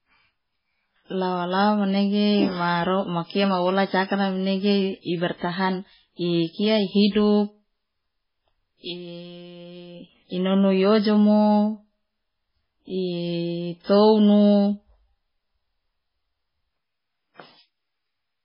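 Throughout the speech, the sound is watery and swirly, with nothing above about 5.3 kHz and smeared, metallic sibilants. This is likely heavy MP3 compression: starved of bits, the encoder drops the treble and flickers weak frequency lines on and off, which fits roughly 16 kbps.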